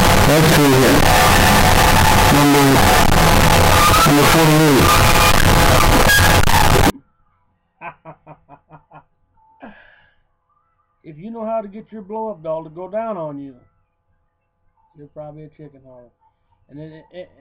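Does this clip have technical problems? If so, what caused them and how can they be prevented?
Yes. From 0.0 to 6.9 s the sound is very loud, harsh and nearly square, with background noise as loud as the main sound. This is likely float read as integer: 32-bit float samples read as 32-bit integers. Declare the sample format correctly when writing and reading.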